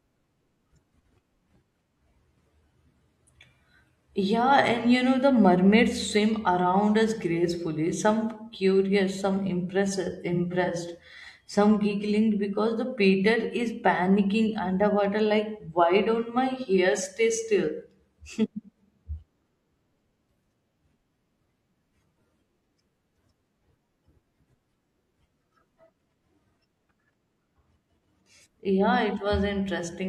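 From 10.33 to 10.70 s, after "some curious some impressed", AAC frame loss with concealment refills brief gaps from the last good spectrum: smeared, phasey blips instead of silent dropouts.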